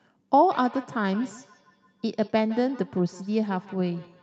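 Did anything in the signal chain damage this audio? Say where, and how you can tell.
Yes, there's feedback echo between two devices at the call stage, from 0.51 s to the end. The speech comes back roughly every 150 ms, peaking about 18 dB down. A second device's speaker reaches this mic, and the echo canceller only removes its own playback.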